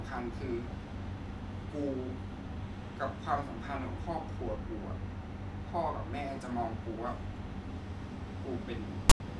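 Speech, ending with file tags played as audio from 9.10 to 9.20 s: text metadata read as samples makes a harsh, off-centre rasp, then falls to dead silence over the zero padding. Compressed data would give symmetric full-scale noise, not this lopsided, hard-edged burst.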